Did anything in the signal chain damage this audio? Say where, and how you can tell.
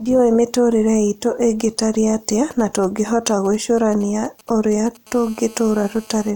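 Yes. In the analogue wiring, radio bursts from a nearby 2G phone were rectified into the audio path. GSM signalling bursts from 2.51 to 4.97 s, just after "mĩtũrĩre itũ ĩngĩtarie atĩa", sound like a galloping pattern of ticks and brief 217 Hz buzzes, sitting well below the speech.

The same analogue pickup becomes a steady GSM phone buzz from 5.07 to 6.31 s, when the phone is in a call. Its 217 Hz bursts are rectified into a hard, raspy, harmonic-rich buzz about 26 dB below the speech, unrelated to it.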